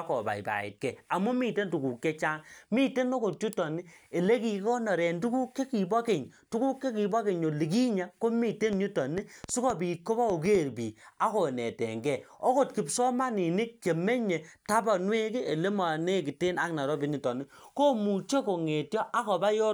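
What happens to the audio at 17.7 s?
Nothing goes wrong at 17.7 s; the speech carries on intact through that moment, with no dropout, click or distortion.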